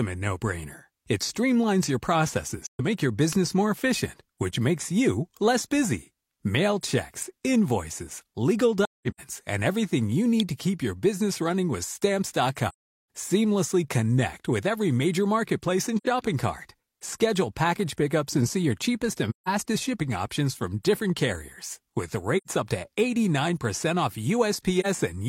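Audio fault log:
2.63–2.81 s, 8.84–9.21 s, 12.69–12.90 s, 15.97–16.06 s (after "every major marketplace and"), 19.30–19.48 s (between "and see your cheapest" and "shipping options from different"), 22.37–22.48 s, 24.80–24.86 s: AAC frame loss with muting. The speech fades out and back in around soft-edged silent holes. The gaps run from about 43 ms to 427 ms. Around 9 s the losses are scattered over 341 ms, with the longest run roughly 200 ms. Whole frames were dropped and zeroed by the decoder, and the overlapping windows smoothed the edges. The gap lengths fit frames of about 43 ms each.
3.33 s, 7.22 s, 10.40 s (between "and everything you" and "to keep your business"): electrical switching spike. Each is a sharp, very brief snap laid on top of the speech, lasting only a few milliseconds at most. The likely cause is a nearby switch, motor or static discharge arcing and being picked up by the audio line.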